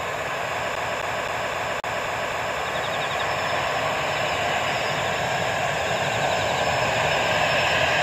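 All the way through, the audio has a grainy, gritty edge that tracks the sound itself, with the quiet moments roughing up most and sitting roughly 30 dB below the signal. That's likely low bit depth without dither, with the levels rounded to something like 7 bits. Between 0.75 and 2.59 s you get the classic CD stuck on one turn: the same 0.26 s chunk comes round seven times in a fast, even stutter, with a brief mute at each jump as the laser skips back a track.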